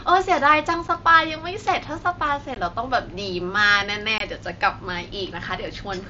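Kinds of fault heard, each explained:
Unconcealed Bluetooth headset packet loss: short chunks of audio between headset and phone go missing and nothing patches them, so abrupt holes appear at 0.88 s, 2.55 s and 4.18 to 4.21 s, lasting 7.5, 15 and 22.5 ms, under the mSBC link's light grain.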